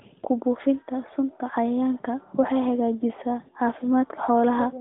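No technical faults can be heard in this recording.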